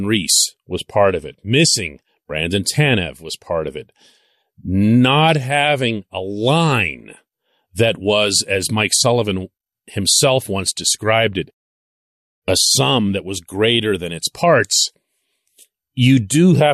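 Speech, with no technical fault audible anywhere in the recording. Nothing in it needs a time or a cause.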